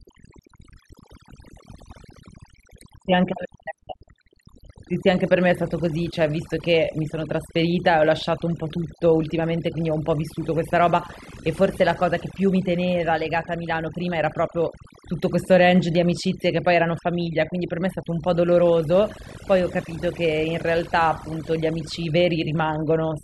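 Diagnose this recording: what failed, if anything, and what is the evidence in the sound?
Overdone noise removal is the culprit, and it runs the whole way through. It sits at the processing stage: a noise reducer set far too hard. Between phrases the background drops, with little twinkling specks popping in and out. Any frequency band sitting close to the noise estimate gets pulled way down or shut off, and the quieter parts of the voice get cut along with the noise.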